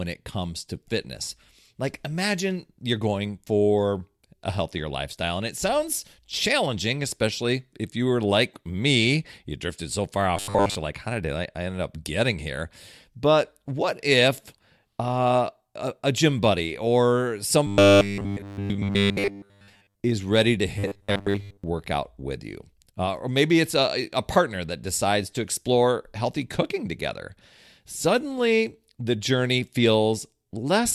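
At 10.37–10.76 s after "drifted so far", 17.67–20.01 s after "a gym buddy or", and 20.79–21.64 s before "with you", the speech becomes a rigid metallic 100 Hz buzz: robotic sound, likely from 10 ms buffers repeated when audio arrived late. Unlike dropouts, the buzz keeps a fixed pitch.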